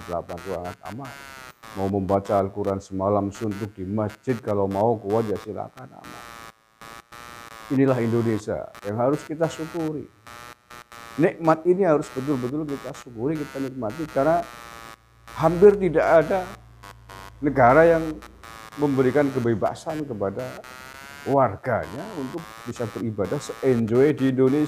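Throughout, computer activity noise: processor or graphics load shifts the shared ground, giving a buzzy pulsing near 100 per second, about 20 dB down, tracking computer activity rather than the sound.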